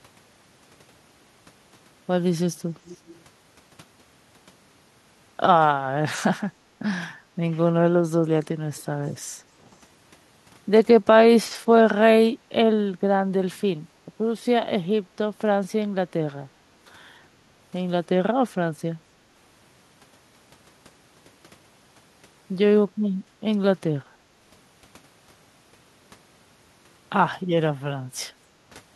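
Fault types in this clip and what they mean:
echo leak: A faint copy of the speech returns about 0.3 s late, likely because the far end's echo canceller let loudspeaker sound leak back through its microphone. It runs from 2.85 to 3.21 s at roughly 25 dB below the speech, and reappears as a brief scrap near 8.8 s, around 35 dB down. A spectrogram shows the harmonic bands repeated as a weak ghost 0.3 s behind the originals, and the waveform shows a small trailing replica.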